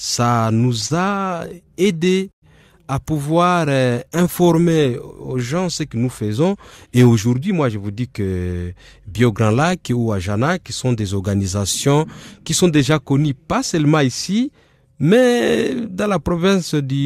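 From 0.57 to 2.44 s there's a run of repeated stalls (stutter): late packets kept draining the jitter buffer, so the receiver stretched the last sound over 14 gaps, the longest 108 ms, and the speech drags and hiccups.

Then from 3.27 to 4.46 s you get a jitter buffer slow-down. Running low, it repeated pitch periods to add 135 ms, so speech plays at 89% speed, same pitch but drawn out.

Finally, 6.37 to 7.77 s is a jitter buffer speed-up. With too much queued, it trimmed pitch periods, removing about a fifth of a second, so speech runs at 112% and sounds hurried.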